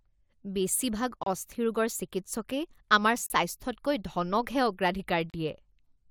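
At 1.23–1.27 s, 3.26–3.30 s and 5.30–5.34 s the speech drops into hard-edged silences of about 30 to 38 ms, spaced roughly 2 s apart. This is a gap between stream segments: mismatched segment timestamps leave holes the player fills with silence, adding time without losing audio.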